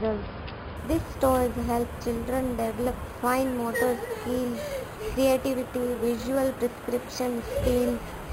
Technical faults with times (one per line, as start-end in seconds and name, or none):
0.77-8.32 imaging from sample-and-hold upsampling